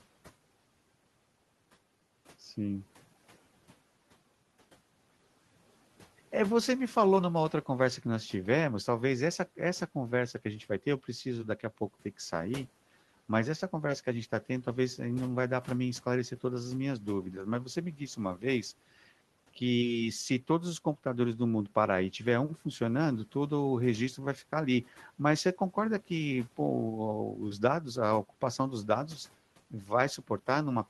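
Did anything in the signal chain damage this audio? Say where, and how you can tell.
Yes, the noise suppressor in the call processing clipped some speech between 29.71 and 29.91 s, right near the end. For about a tenth of a second the sound dips by up to about 9 dB and goes faint, because the suppressor mistook it for the room noise sitting about 26 dB below and turned it down.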